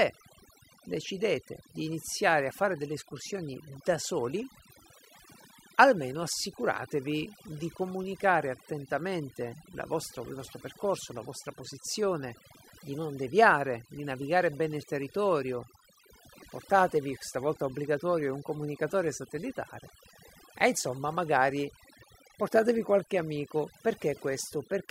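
A speech recording shows overdone noise removal throughout: the reduction is set so hard that bands near the noise floor vanish, leaving twinkling near-silence and quiet parts of the voice stripped away.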